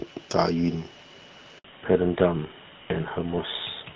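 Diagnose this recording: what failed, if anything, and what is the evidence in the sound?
A handover gap at the network stage. The speech cuts out at 1.58 s and stays silent until 1.64 s, a 60 ms hole. No frames arrived while the call moved between networks. The speech fades quickly into the gap, and whatever was said there is lost.

A fallback to narrowband at the codec stage. Before 1.64 s the speech has wideband HD Voice detail with light coding roughness, which fits AMR-WB at about 12.65 kbit/s. From 1.64 s to the end, nothing remains above 4 kHz. The speech turns duller and rougher, which fits GSM full rate.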